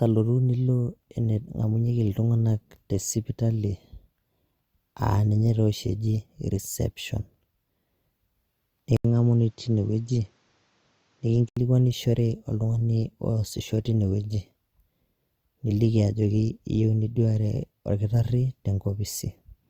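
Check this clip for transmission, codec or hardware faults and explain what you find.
One fault stands out, a likely input switched to a poorer device. From 8.97 to 11.57 s the speech turns duller and boxier. Nothing above 7.6 kHz comes through in that stretch. An 80 ms silence marks the switch. The recording has likely jumped to another microphone or a headset's call profile, which passes a narrower band. The level stays about the same. A new noise floor sits roughly 45 dB below the speech. The fuller sound returns at 11.57 s.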